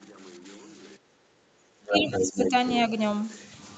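From 1.24 s to 2.53 s, the speech dips and thins in pieces. The drops total roughly 0.7 s and reach about 15 dB at the deepest. This is speech suppressed in double talk. Both ends were likely talking at once. The echo canceller could not tell the near talker from the loudspeaker echo, so it turned everything down. The talker's level sags and breaks up while the far side is active.

Inside that stretch, from 1.88 s to 2.51 s, a second voice comes through at about the same level as the talker. This is the other side's voice leaking through. It was likely played on the talker's loudspeaker and picked up by the microphone. The echo canceller did not remove it. It returns briefly from 2.67 s to 2.82 s, much fainter this time, around 15 dB below the speech. It is a short scrap at the tail of the clip.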